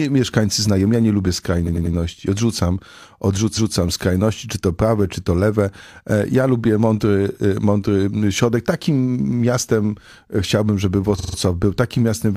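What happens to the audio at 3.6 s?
Around 3.6 s the audio stutters: a stretch of roughly 0.19 s, from 3.53 to 3.73 s, plays and then plays again immediately. This is a repeated-frames fault. A block of compressed audio about 185.8 ms long, which fits a run of four codec frames, was delivered twice. The decoder played the duplicate as new material, so that fraction of a second recurs once and the clip runs about 186 ms longer.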